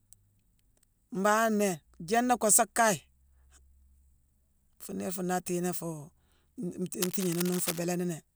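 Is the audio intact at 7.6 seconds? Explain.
No. From 7.02 to 7.79 s, cable scratch noise sits roughly 10 dB below the speech as a rough, scratchy rustle. It is likely a worn lead or connector flexing, its contact resistance jumping erratically. Spectrograms show ragged broadband smears; waveforms show dense irregular spikes.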